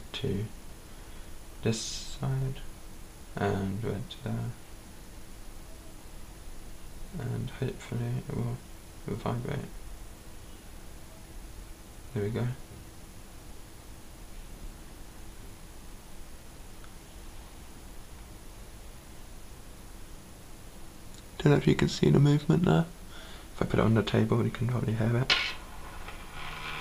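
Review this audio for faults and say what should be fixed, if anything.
Nothing needs fixing, as no faults turn up anywhere in the recording. There is no dropout, glitch or distortion event to correct.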